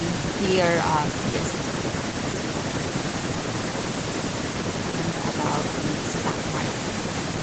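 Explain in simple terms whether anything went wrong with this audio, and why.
Nothing went wrong that I could hear: nothing stood out on listening to this speech, and its slightly dull top end, with nothing above 8 kHz, is simply how a normal call connection carries sound, not a problem.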